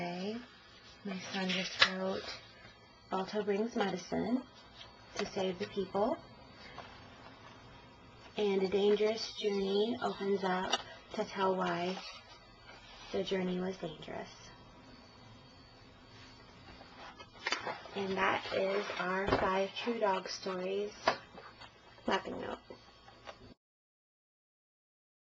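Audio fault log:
7.26–7.32 s, DAB burbling: a brief burst of short noise blips in single sub-bands. This points to a few MP2 frames corrupted by a low leftover bit error rate, well under one percent. Unlike a dropout, the sound warbles rather than going silent.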